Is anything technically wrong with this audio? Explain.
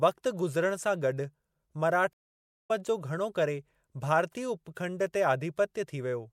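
Yes. There is a stream reconnect in this speech at 2.13 s. The connection dropped and the audio goes silent for about 0.56 s, until 2.71 s. A fresh decoder then picked up mid-stream, so the speech resumes roughly half a second later, with that stretch missing.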